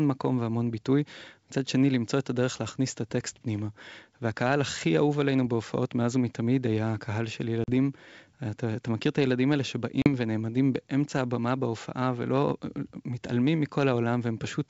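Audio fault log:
7.64–7.71 s and 10.02–10.09 s, packet loss on an ADPCM call: about 40 ms of the speech drops out abruptly each time, consistent with a couple of packets lost and filled with silence. The holes have hard edges. While the gap passes, the decoder's adaptive predictor and step size drift away from the sender's, so the speech resumes slightly distorted before settling. The wideband G.722 coding stays clear up to 7 kHz around both gaps.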